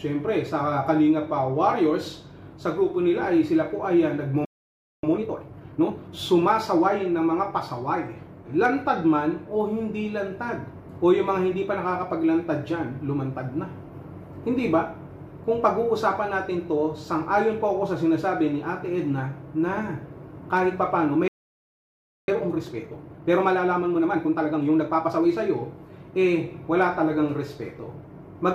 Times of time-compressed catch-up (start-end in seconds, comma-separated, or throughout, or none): 5.03-6.19, 22.28-25.28